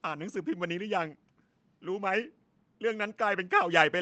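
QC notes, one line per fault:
Nothing stood out on listening to this speech, which comes across as a typical call-path recording.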